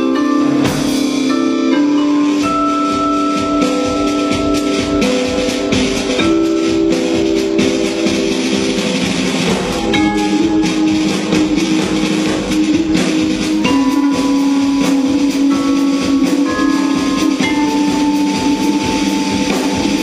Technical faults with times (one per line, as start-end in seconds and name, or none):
1.53-13.53 adaptive stream at a lower bitrate